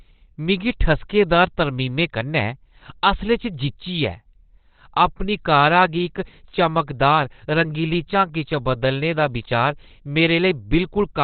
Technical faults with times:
0.00-11.23 Opus compression

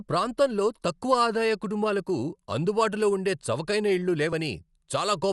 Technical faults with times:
0.00-5.32 Dolby Digital compression

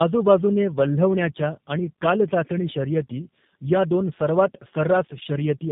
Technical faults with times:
0.00-5.72 tandem speech coding

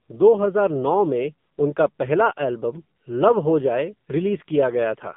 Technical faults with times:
0.00-5.17 AMR narrowband mobile codec

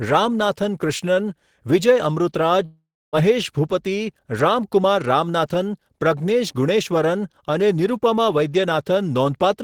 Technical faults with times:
2.65-3.16 long network dropout

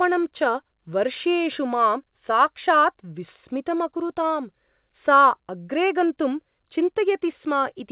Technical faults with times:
none

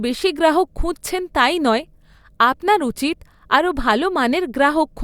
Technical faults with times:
none

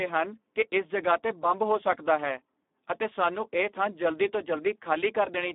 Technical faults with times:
0.00-5.54 Speex codec

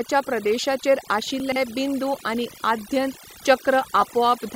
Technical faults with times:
0.00-4.56 overdone noise removal
0.60-0.63 lost LE Audio frames
1.40-1.56 chunks out of order
4.01 lost LE Audio frames

